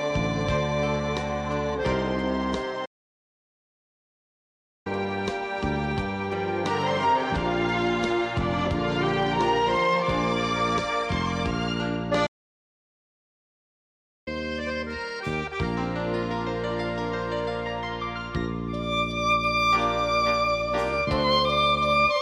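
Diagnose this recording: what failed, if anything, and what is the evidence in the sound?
The sound stops dead mid-flow twice, at 2.85 to 4.87 s and again at 12.26 to 14.28 s, each a clean two-second silence before it picks up again. This is a playback stall, most likely the player starving for data or its output thread being blocked.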